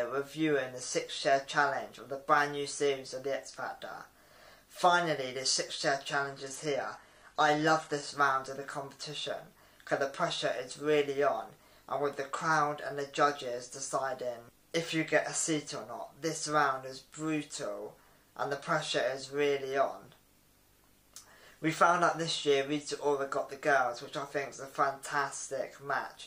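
From 6.12 to 8.12 s, an adaptive stream at a lower bitrate: quality drops suddenly, artefacts rise, nothing remains above 12.3 kHz, but unlike a dropout, there's no gap.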